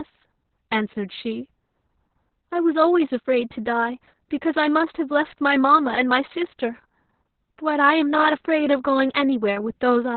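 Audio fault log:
Throughout: Opus voice compression. The speech is muffled, hoarse and slightly robotic, which fits the SILK linear-prediction coder in narrowband mode at a very low bitrate, around 6 kbps. Nothing is left above 4.3 kHz, and the coarsely coded excitation roughens every voiced sound. On a spectrogram, energy stops at a flat ceiling near 4.3 kHz, and the harmonics look smeared and grainy. The waveform looks normal in level but lacks fine detail.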